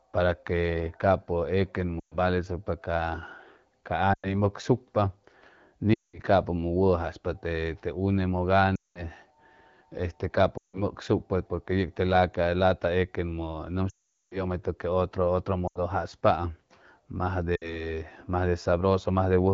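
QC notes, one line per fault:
2.0 to 2.16, 4.13 to 4.40, 5.94 to 6.19, 8.75 to 9.06, 10.57 to 10.84, 13.89 to 14.43 (just before "que otro otro"), 15.67 to 15.81 (right after "que otro otro"), and 17.55 to 17.91 s, lost AMR speech frames. Each time the decoder stretches the last good pitch and vocal tract shape at falling gain, so the speech smears, then fades. The long 14 s gap drops to near silence and comes back weak or rough.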